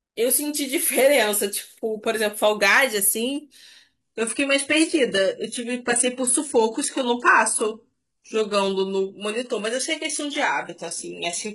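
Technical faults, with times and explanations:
4.01 s to the end, adaptive stream at a lower bitrate: the speech abruptly switches to a much thinner rendition with no gap. From that point nothing remains above about 11.1 kHz. That sound fits a spectral-band-replication codec at a very low rate, roughly 12 kbit/s, where the player dropped down from a cleaner, higher-rate version, likely because the connection slowed.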